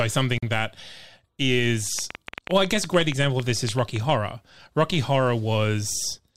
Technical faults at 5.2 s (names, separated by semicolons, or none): none